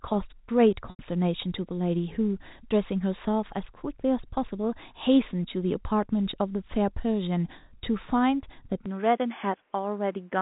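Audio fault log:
0.90–0.99 s, packet loss with pitch repetition: a 90 ms gap, which fits about three lost packets, is bridged by repeating the last pitch period. It sounds like a briefly held, buzzy tone rather than a click or hard silence, because the repeated cycle stands in for the missing sound.
8.86–10.41 s, input switched to a poorer device: the sound turns duller with no gap, losing everything above 3.5 kHz, dropping about 5 dB and gaining new noise around 40 dB below the signal. The likely cause is a change of microphone. It differs from the steady 4 kHz telephone band because the narrowing arrives suddenly and stays.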